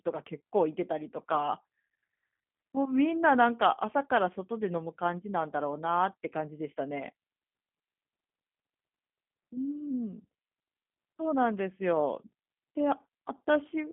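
A G.729 codec, sounding like the G.729A variant at about 8 kbit/s, rebuilds this speech from a filter and sparse pulses throughout. The result is a roughened, synthetic tone, squeezed to roughly 200 Hz to 3.5 kHz, with nothing above 3.6 kHz.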